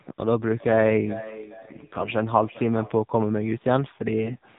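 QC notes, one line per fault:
Throughout: AMR narrowband mobile codec. Everything above 4 kHz is gone, and the speech has that buzzy, synthetic edge you get when a vocal-tract model is fed only a handful of pulses per frame. The damage is plainly audible, which fits a low rate around 7.4 kbps.
1.62–2.11 s and 4.26–4.38 s: AMR bit errors. The speech keeps roughly its pitch and level but goes hoarse, scratchy and gargly. Flipped bits in the less-protected part of each frame, at a few percent, misplace the excitation pulses and throw off the finer gain and spectral values.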